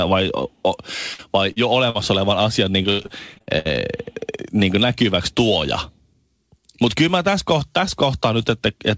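Burst of packet loss hits this speech recording at 1.14 to 1.20 s and again at 1.90 to 1.96 s, just before "olevan asian niin". Each time a run of packets arrived too late or not at all, so the receiver stretched the last sound for about 46 ms while fading it, then resumed about 40 ms further on, leaving a held buzz or hiss and a small piece of speech gone.

Short concealed packet loss occurs at 1.52 to 1.58 s. Here a briefer hole was patched by continuing the preceding sound for about 34 ms, pitched or noise-like depending on what came before, and then blended back into the real signal. It comes across as a quick smear or wobble, with about 40 ms of actual audio never heard.

Repeated packet loss (robotic sound) runs from 2.82 to 3.67 s, right after "olevan asian niin". Eight separate gaps, the longest about 78 ms, were each filled by extending the last sound, and together they cover about a third of that stretch. 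The rapid alternation of patched and real audio gives a choppy quality, with about 280 ms of speech lost in total.

All of this sits on a call path whose coding cuts everything above 8 kHz, which fits G.722.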